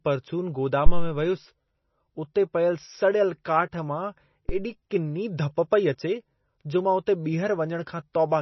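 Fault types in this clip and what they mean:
MP3 compression: The audio sounds watery and swirly throughout, with heavy codec damage and nothing above 5.9 kHz, which points to a low bitrate near 24 kbps and likely MP3 encoding. A spectrogram shows a hard ceiling and flickering, patchy high-frequency bins.
Phantom power thump: A supply switching on a live input sends a step through the coupling capacitors, heard as deep thumps at 0.86 s and 4.49 s, decaying over about 66 ms and 46 ms. The waveform shows a slow, low-frequency swing.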